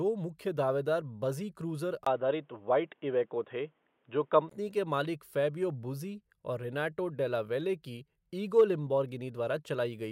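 At 2.05 s the speech drops out for about 20 ms, then returns dull and boxy. Nothing above 3.8 kHz gets through, so the crisp consonant detail is gone. The level shifts by roughly 5 dB, and a faint new background noise appears well below the speech. The likely cause is an input switched to a poorer device mid-recording. The full, brighter sound comes back at 4.51 s, just before "के मालिक फैबियो".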